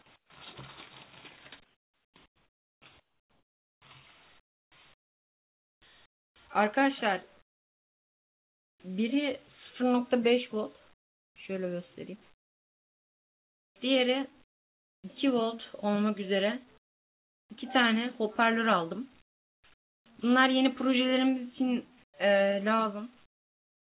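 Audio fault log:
0.16–0.3 s, 1.6–8.8 s, 10.94–15.04 s, 16.78–17.5 s, 19.22–20.06 s, 22.04–23.82 s: comfort noise in place of the background. In the pauses the real background gives way to steady, featureless hiss, about 16 dB and about 24 dB quieter in the first and fourth gaps. This is likely discontinuous transmission, with the receiver synthesising noise. The band stops at 4 kHz throughout, which fits a 64 kbps G.711 call path.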